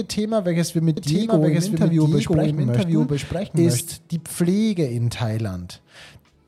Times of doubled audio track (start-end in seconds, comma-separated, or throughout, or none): 0.97-3.81